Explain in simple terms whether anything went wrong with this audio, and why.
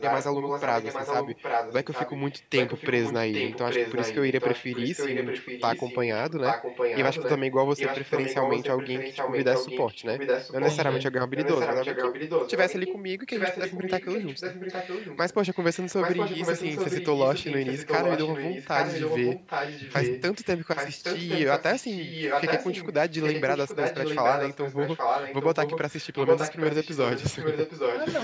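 Something did go wrong: there's an echo leak running through nearly the whole recording. A second copy of the speech trails the original by about 0.82 seconds, from 0.0 to 5.98 s, 6.3 to 11.03 s, 11.35 to 12.98 s and 13.3 to 28.23 s. It's a bit quieter than the main voice at the start and end, but about as loud between 6.3 and 12.98 s. The likely cause is a speakerphone whose echo canceller let its own playback back into the call.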